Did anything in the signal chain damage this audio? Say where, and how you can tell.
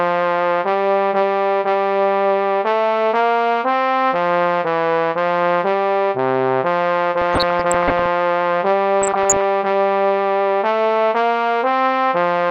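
Yes, at the codec stage. Throughout the clip the sound is dull, with the top end missing and a gurgling, granular texture riding on everything. This is most likely MP2 compression, at a bitrate that fits something around 80 kbps. Too few bits are spread across the codec's 32 sub-bands, so upper bands drop out and the remaining ones are coarsely quantised. Unlike bit-error damage, this dullness is constant rather than bursting out at moments.

The damage in the transmission path shows up as DAB burbling, from 7.22 to 8.07 s and again from 9.02 to 9.41 s. In these stretches the sound breaks into blips of noise in single sub-bands. Bit errors, at a rate of roughly half a percent, have slipped past error correction into the MP2 data. Corrupted samples then put short blips of noise in single sub-bands, and corrupted scale factors make sub-bands jump in level for up to a frame. What separates this from plain compression is that it arrives in short, erratic bursts.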